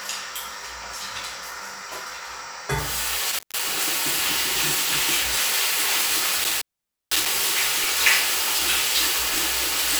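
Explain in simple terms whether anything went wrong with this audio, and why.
An intermittent contact, like a loose plug, breaks the sound twice. It cuts out briefly near 3.31 s, then for about half a second near 6.44 s.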